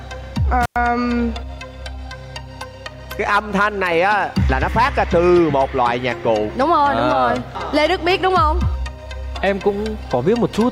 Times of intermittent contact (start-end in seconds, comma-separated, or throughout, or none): 0.63-0.76